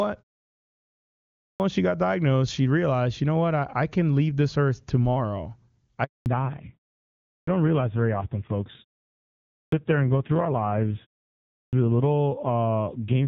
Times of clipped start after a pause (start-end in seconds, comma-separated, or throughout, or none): 1.40-1.60, 7.28-7.47, 9.51-9.72, 11.54-11.73